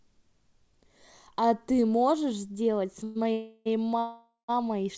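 The speech stalls three times, at 3.04 to 3.17 s, 3.32 to 3.68 s and 3.99 to 4.50 s, each filled by a fading buzz or hiss, the last dropping into silence for about 160 ms. This call audio freeze likely comes from packets held up in transit until the jitter buffer ran dry. The speech then resumes where it stopped, nothing lost, pushed later by each gap. The call path's codec leaves nothing above 8 kHz.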